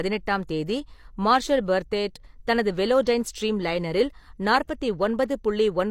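Pre-echo sits at 4.67 to 4.69 s in this speech clip: a hiss of about 20 ms arrives just ahead of a sharp onset, and the attack itself sounds softened and smeared. The transform codec quantised that block as a single unit, so the coding noise it allowed for the loud transient was spread across the whole block, including the near-silent stretch before the attack, where nothing masks it.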